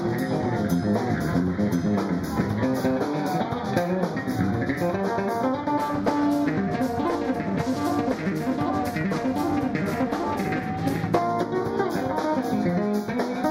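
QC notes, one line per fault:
Throughout: channel delay (comb filtering). One channel arrives late by roughly 0.2 ms, and the two are summed to mono. Content common to both cancels at fixed, evenly spaced frequencies. The first notch sits around 3 kHz, with further notches repeating higher up. This carves a hole in the upper presence range. The sound comes across hollow and phasey, and the coloration never moves.
5.79 to 11.19 s: periodic clock jitter. The converter clock is being shaken at roughly 400 Hz. Every component of the sound picks up sidebands about 400 Hz above and below it, and the higher components carry the strongest ones. The result is a rough, metallic edge laid over the sound. It follows the signal and has nothing of its own to add in quiet moments.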